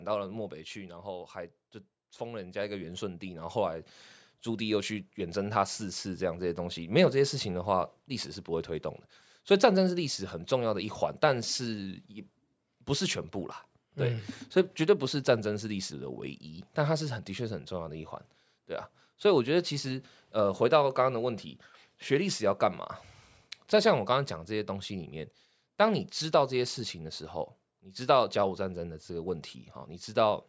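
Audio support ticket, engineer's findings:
Automatic gain falling, 0.05 to 1.14 s, about -6 dB, and again 6.89 to 30.38 s, about -4 dB. Call AGC pulling gain down after judging input loud or noisy. Speech and background drop together. Waveform envelope tapers; spectrogram dims evenly across all bands.

Automatic gain rising, 1.13 to 18.05 s, about +11 dB, overlapping the second fall from 6.89 s. Call AGC raising gain after judging input quiet. Speech and noise floor swell as one. Waveform envelope widens gradually; spectrogram brightens uniformly, background included, with an empty band above 8 kHz throughout.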